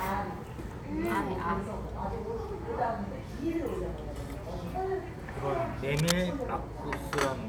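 From 5.93 to 6.12 s, a burst of cable scratch noise cuts across the sound. It is a dense, uneven scratching, roughly as loud as the sound itself. A worn cable or connector being moved is the likely cause. Its contact resistance kept changing.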